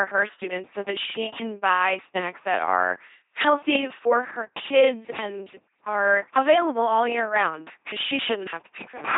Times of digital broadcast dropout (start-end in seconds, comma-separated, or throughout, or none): none